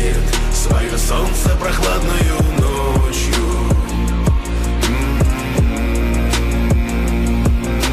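No technical faults can be heard anywhere in the clip.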